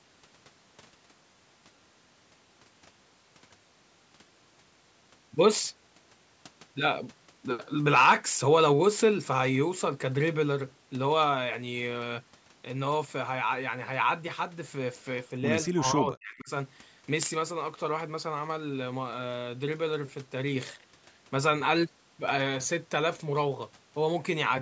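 A speech recording whose talker briefly fades almost to silence, a drop of around 40 dB, from 15.7 to 16.5 s, most likely speech suppressed in double talk, as an echo canceller ducked the voice during overlapping far-end speech.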